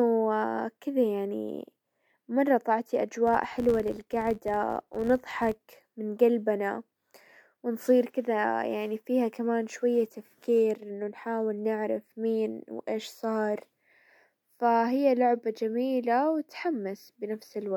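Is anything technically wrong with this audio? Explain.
Yes. From 3.27 to 5.61 s the speech carries a filter restarted on every block. The filter loses its memory at each block boundary and starts again from silence. Each restart leaves a small transient. Together they form a buzz at about 86.1 Hz, which fits a 512-sample buffer. The buzz rises and falls with the speech level.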